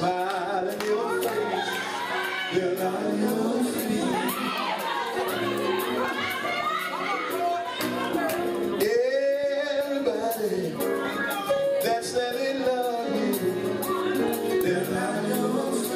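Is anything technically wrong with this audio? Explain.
No, nothing technically wrong can be heard here.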